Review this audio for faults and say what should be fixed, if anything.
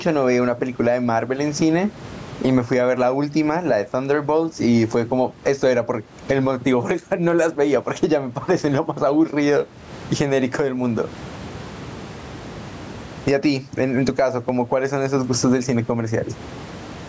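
Gain pumping throughout: room noise swells in pauses and ducks by about 20 dB under louder speech, likely from excessive microphone gain driving a fast limiter. Lowering the microphone input gain so the limiter seldom engages would prevent it.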